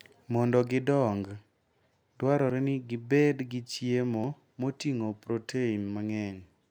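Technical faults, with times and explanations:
2.50 s and 4.24 s, dropped buffer (overrun): jumps where the sound skips ahead, just before and just after "ni gibed gi chiemo", losing around 10 ms and 40 ms, likely from unread buffers being overwritten. The waveform shows an abrupt, gapless step; the spectrogram shows a thin vertical broadband line.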